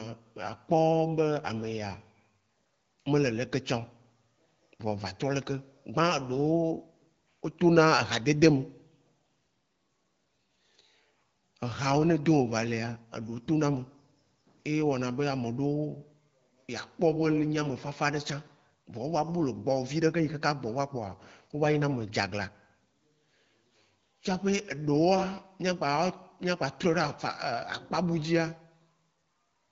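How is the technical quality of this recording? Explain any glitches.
No glitches are audible: the speech carries the band limit and light coding character of an AMR wideband (HD Voice) codec at a setting that points to 12.65 kbit/s, with nothing above 7.4 kHz.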